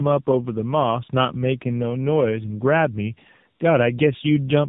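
Tandem speech coding runs through the whole clip: the call was decoded and re-encoded at each link border, so a second speech coder had to work on audio already damaged by the first. The combined artefacts point to two AMR-NB coders in a row, the later one at a lower rate. The speech sounds rough and muffled, with a warbly, unstable quality, and nothing remains above 3.8 kHz.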